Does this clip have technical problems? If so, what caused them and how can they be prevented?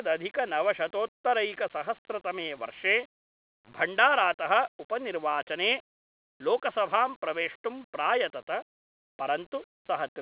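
No, this clip does not have technical problems, so there is nothing that needs preventing.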